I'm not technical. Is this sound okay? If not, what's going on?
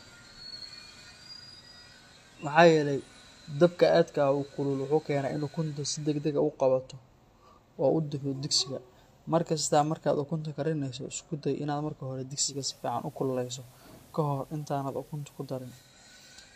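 No. From 12.42 to 15.94 seconds there is digital radio blending to analogue: the radio lost its digital signal and switched to the station's ordinary FM broadcast, then switched back. Each switch is a quick fade of about a fifth of a second. During that stretch the speech picks up a faint background hiss, while the loudness stays the same.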